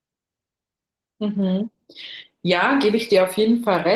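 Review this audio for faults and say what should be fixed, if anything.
Opus voice compression runs through the whole clip, and the damage is plainly audible. The speech sounds hoarse and slightly robotic, which points to roughly 16 kbps in hybrid mode. Below 8 kHz the linear-prediction layer codes the excitation coarsely, and above 8 kHz a thin transform layer fills in the top of the band. The framing fits 20 ms frames. On a spectrogram, harmonics below 8 kHz look smeared and grainy, and the content above 8 kHz is patchy and blocky from frame to frame. Encoding at a higher Opus bitrate, or keeping an uncompressed master, would prevent it.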